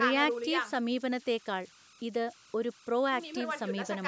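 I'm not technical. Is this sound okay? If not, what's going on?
No. Throughout the speech there is a fault called converter idle tones. The chip that turned the sound into digital data was left without the small added noise that keeps it from settling into a repeating pattern when the input is quiet. That pattern produces a whistle near 1.5 kHz, noticeable in pauses and as a grainy texture under the speech. The call's microphone processing, which trims the deepest bass, is not part of this problem.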